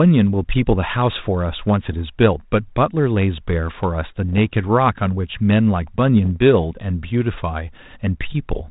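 Bit errors on an ADPCM link strike the speech three times: 1.89 to 1.94 s, 4.33 to 4.39 s, and 6.25 to 6.36 s. A corrupted code word sends the decoder's step size and predictor off course, so each hit is a pop followed by a rough, gritty burst with a brief level change, lingering some milliseconds while the decoder recovers. That lingering tail sets them apart from a bare transmission click, which is gone after a single instant.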